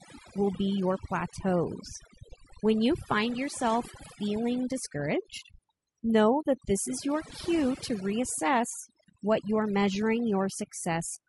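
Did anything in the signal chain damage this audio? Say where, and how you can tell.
Yes. At the call-processing stage, overdone noise removal runs through the whole speech clip. The background collapses into near silence dotted with twinkling specks. A noise suppressor set far too aggressively is pulling individual frequency bands down or off whenever they sit close to its noise estimate. The quieter parts of the speech fall under that threshold and get gated out along with the noise.

At the codec stage, the speech also has a rough, grainy texture throughout, with noise filling the gaps between harmonics and a top band that sounds synthetic. The likely cause is low-delay AAC compression, AAC-ELD at around 32 kbps. At that bitrate the damage is plainly audible.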